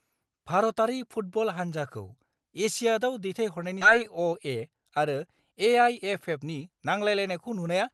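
A speech clip passed through a WebRTC call path whose top end stops near 12 kHz, which fits Opus at about 32 kbps. At 3.81–3.83 s there is a skip ahead: about a second of audio is dropped and the two sides are joined directly, with no silent gap as a dropout would leave. From 3.91 s to 7.93 s a jitter buffer speed-up runs the audio at 108% by trimming pitch periods, roughly a third of a second in total. The speech sounds hurried but keeps its pitch, unlike a resampling error.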